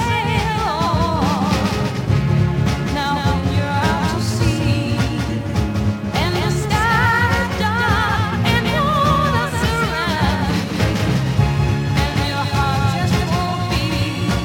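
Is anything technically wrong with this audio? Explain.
Yes. A doubled audio track runs through the entire clip: a second, full-band copy of the sound trails the original by around 200 ms at roughly 5 dB lower. The likely cause is the signal being captured twice, once through a slower path, so two identical copies are summed out of step. It sounds like a dry, distinct slapback echo on every event, with no decay or room colour.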